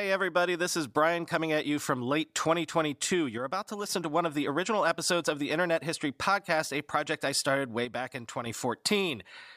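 Speech with two abrupt level drops of about 6 dB, from 3.38 to 3.89 s and from 7.85 to 8.46 s. The likely cause is one channel drops out before the mono sum, because the sound halves cleanly rather than going silent or fading.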